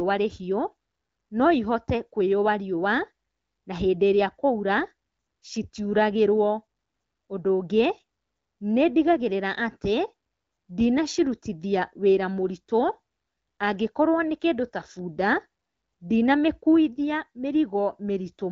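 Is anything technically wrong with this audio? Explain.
No, nothing is technically wrong: the speech comes through the AMR wideband (HD Voice) codec at 12.65 kbit/s, a rate at which it stays clear, with only the light coloration that codec leaves.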